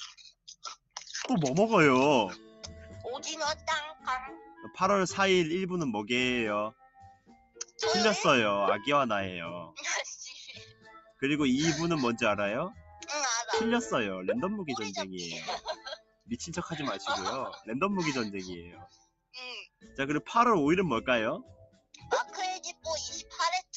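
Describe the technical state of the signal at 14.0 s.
At 14.0 s, a noise suppressor applied to music or sounds is active throughout: it treats held tones and tails as noise, pulling them down by around 10 dB so the sound pumps.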